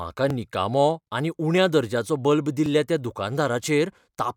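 Samples were likely overwritten before the program read them, a dropped buffer (overrun), so the speech splices straight across each gap: a small jump at 0.30 s before "निकामो आनी", at 1.58 s after "निकामो आनी" (a few milliseconds each), and at 2.66 s (about 10 ms).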